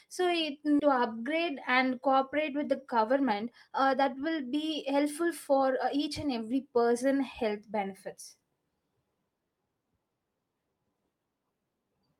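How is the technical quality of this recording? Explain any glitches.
The recording has two timing glitches near the start.

At 0.79 to 0.81 s there's a skip ahead. Roughly a second of speech got dropped while later audio waited, so playback jumps forward almost seamlessly.

From 0.90 to 6.59 s, ending just before "person health benefits", there's a jitter buffer speed-up. The overfull buffer kept trimming pitch-period slices, about half a second total, so speech runs 110% fast at normal pitch, sounding rushed.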